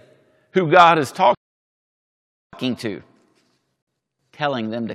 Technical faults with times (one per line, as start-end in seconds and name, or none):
1.35-2.53 playback stall
2.53-4.95 catch-up at higher speed
3.82-3.87 gap between stream segments